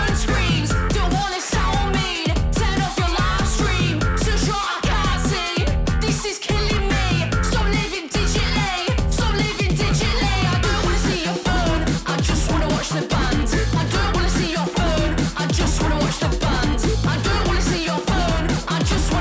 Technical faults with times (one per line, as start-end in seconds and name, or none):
none